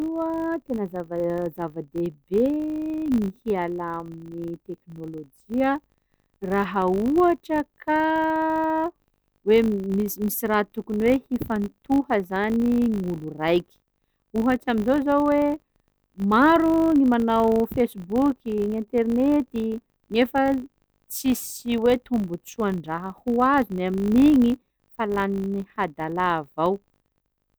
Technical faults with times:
0.00-27.59 filter restarted on every block

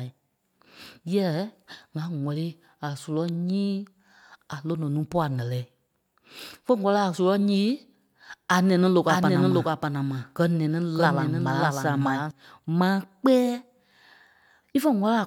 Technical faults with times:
9.09-12.31 doubled audio track

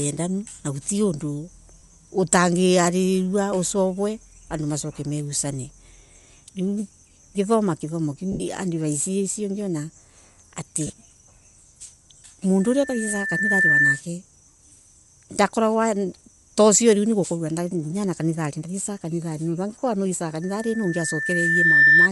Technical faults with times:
0.00-22.11 Bluetooth LC3 compression
1.79-1.82 lost LE Audio frames
8.32-8.40 lost LE Audio frames
10.87-10.90 lost LE Audio frames
12.60-14.01 loudspeaker feedback squeal
20.42-22.09 loudspeaker feedback squeal

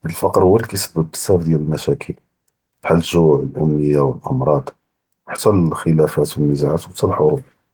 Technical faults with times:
none

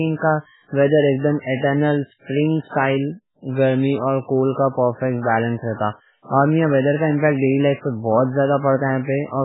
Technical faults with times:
0.00-9.45 MP3 compression

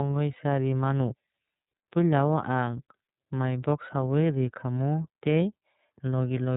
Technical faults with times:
0.00-6.57 iLBC codec

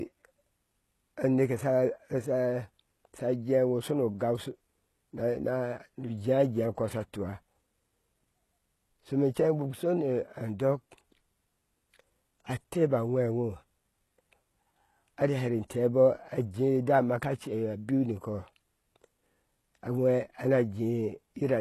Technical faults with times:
0.00-21.61 HE-AAC compression

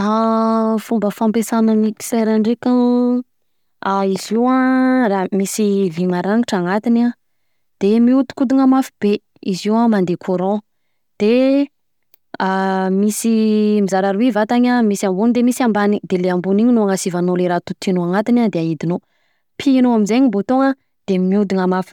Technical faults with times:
none

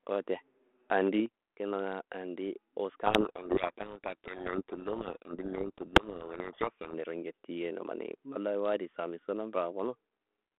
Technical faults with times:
0.92-1.10 microphone overload
1.26 microphone volume stepped down
3.06-6.98 codec payload misread

